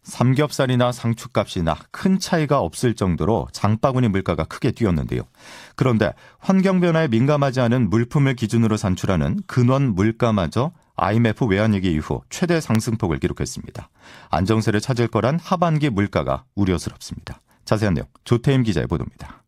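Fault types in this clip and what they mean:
Loud pop: Two sharp single pops cut through the speech, at 12.75–12.77 s and 17.27–17.29 s, each standing well above the speech level, the first louder. They likely come from a sudden voltage pulse from a plug, switch, static or driver glitch.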